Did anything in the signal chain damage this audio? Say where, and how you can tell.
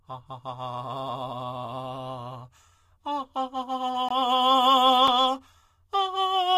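Yes, there are two blocks of digital silence, which points to the driver or buffer stage. At 4.09 to 4.11 s the music drops out for 20 ms, a short hole. At 5.08 s a 5 ms gap is heard as a single tick. Both cut out and back with no fade, which is what you get when the output buffer isn't filled in time and gets played as zeros.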